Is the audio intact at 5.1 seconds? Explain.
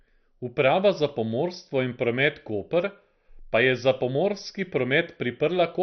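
No. Throughout the clip, speech sounds dull and gurgling, with nothing above 6.2 kHz. Likely MP2 compression at a low bitrate, switching off upper sub-bands and coarsely quantising the rest.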